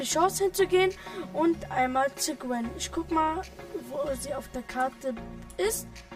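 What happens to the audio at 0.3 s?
At 0.3 s the sound is hollow and phasey from channel delay (comb filtering), present throughout the clip. One channel trails the other by about 5 ms. Summed to mono, they cancel at evenly spaced frequencies, starting near 100 Hz.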